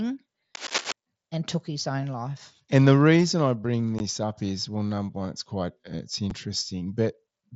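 From 0.55 to 0.92 s, just before "and took his own", a worn cable or connector being moved is the likely cause of cable scratch noise: its contact resistance flickered, adding dense, uneven scratching and rustling bursts, nearly as loud as the speech, over the audio.

Later, the Bluetooth link between headset and phone dropped voice packets with no concealment, which is unconcealed Bluetooth headset packet loss. At 3.99 s, between "the reason I bring" and "up is well number", about 15 ms of speech vanishes. At 6.30 s, after "one it's quite it's", a shorter 7.5 ms gap follows. Both are abrupt holes in the speech of the mSBC wideband stream, with hard edges.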